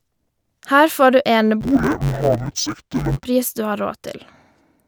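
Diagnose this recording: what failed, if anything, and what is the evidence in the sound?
Sample-format conversion failed: interleaved audio read as planar, from 1.61 to 3.26 s, right after "får du". The speech turns dull and robotic with a buzz at about 93.8 Hz. Each 10.67 ms block, which fits a 512-sample buffer, is split into half-speed left and right halves.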